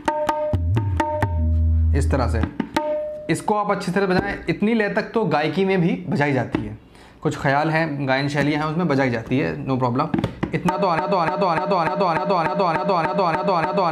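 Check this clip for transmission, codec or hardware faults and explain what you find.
One fault is present: a broken-record loop. From 10.99 s to the end, a fragment of about 295 ms repeats exactly, back to back, ten times. A stalled player, encoder or stream likely kept resending its last buffered piece. The audio that belonged there is lost.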